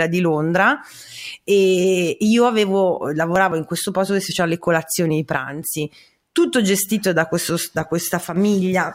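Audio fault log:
5.37–5.62 s and 8.24–8.36 s, one channel drops out: the speech suddenly sinks by about 6 dB for roughly a quarter of a second, then for about 0.12 s, snapping back to full level each time. The likely cause is one side of a stereo pair briefly going silent. After the two sides are summed to mono, material shared by both loses half its contribution, and anything carried only by the missing side vanishes.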